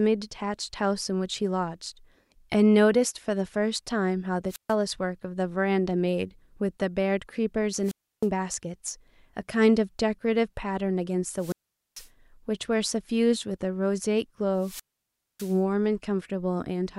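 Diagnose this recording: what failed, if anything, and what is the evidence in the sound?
A wireless microphone squelch dropout failed the analogue radio link ahead of the converter. The speech cuts out four times: 4.48–4.75 s, 7.83–8.28 s, 11.36–12.09 s and 14.55–15.62 s. Each starts with a brief rise of hiss, then a near-silent hole of 137, 314, 444 and 602 ms. The holes grow longer each time. The FM signal faded, the receiver's squelch muted the output, and the sound returned when the signal recovered.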